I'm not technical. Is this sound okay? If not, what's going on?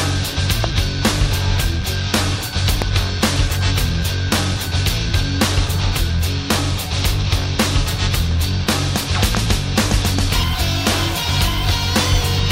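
No. There are three loud pops, at about 0.64, 2.82 and 9.35 seconds. Each is a single sharp crack lasting a split second. The sound carries on underneath. Each is likely a brief electrical jolt, such as from a plug, switch or static.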